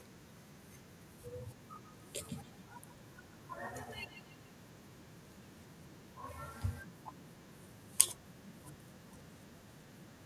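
From 1.74 to 7.45 s, feedback echo between two devices: a second device replays the speech into the open microphone, so it returns about every 150 ms, peaking about 8 dB below the voice.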